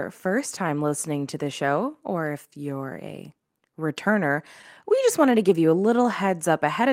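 A run of slight hiccups and an uneven, faintly dragging tempo runs through this speech clip from 0.28 s to 6.66 s, with small stutters at irregular points rather than one obvious glitch. These are repeated timing corrections: the receiver keeps inserting repeated slivers of audio, all in the same direction, so the stretch plays back at about 96% speed and grows by roughly a third of a second in total. The cause is clock drift between sender and receiver. The sender's audio clock runs about 4 percent slow relative to the receiver's, so samples arrive more slowly than they are consumed and the jitter buffer keeps draining. To avoid running empty, the receiver repeatedly pads with duplicated fragments, which explains why the hiccups recur unevenly across the whole clip.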